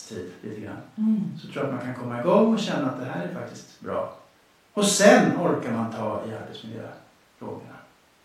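No technical faults are audible anywhere in the recording.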